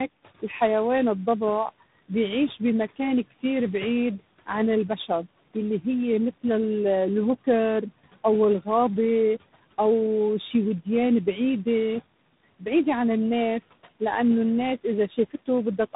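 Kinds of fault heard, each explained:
Tandem speech coding: the speech was decoded and re-encoded by successive speech codecs, each working on the previous one's degraded output. The sound fits four coders ending in G.726 at 24 kbit/s. It is rough, muffled and warbly, with nothing above 3.8 kHz.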